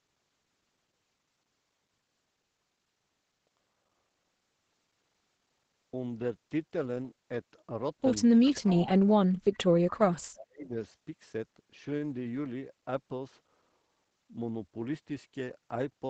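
From 8.45 to 8.9 s, a faint delayed copy of the speech is audible under the talker. This is an echo leak. It trails the original by about 386 ms and sits about 15 dB below it. The likely cause is a far-end echo canceller that failed to remove its loudspeaker's pickup and sent the remainder back.

Speech suppressed in double talk overlaps this. The talker's level dips from 8.49 to 8.63 s, by about 25 dB. It drops again from 8.81 to 9.02 s, by about 35 dB. From 9.45 to 10.73 s, roughly a second of speech is pulled down by up to about 35 dB. There it fades. The likely cause is an echo canceller that could not tell near-end speech from echo while both sides talked. It turned both down.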